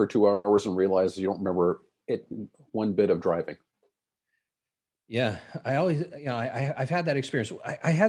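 From 0.33 to 0.46 s the speech stalls, its last sound drawn out into a fading buzz before resuming intact. This call audio freeze likely comes from delayed packets draining the jitter buffer, adding about 110 ms of delay.

At 0.56 to 0.59 s a brief smear passes over the speech. This is short concealed packet loss: about 20 ms never arrived and was patched by extending the preceding sound.

From 5.93 to 7.09 s the speech runs noticeably hurried at an unchanged pitch. This jitter buffer speed-up trimmed pitch-period slices, about a tenth of a second in total, to play at 107% and reduce the excess delay.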